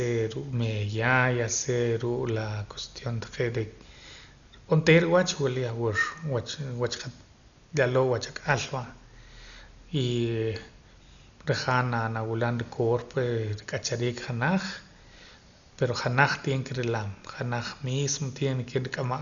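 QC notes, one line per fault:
Throughout, Dolby Digital compression: the likely cause is an AC-3 style encoder starved of bits, with damage heavy enough to fit a rate near 48 kbps. To cope, it trimmed the band so that nothing survives above 6.9 kHz, and it left many frequency lines without mantissa bits, which the decoder filled with dither noise. The speech therefore sounds dull and muffled, with a rough, fluttering grain clinging around its tonal parts.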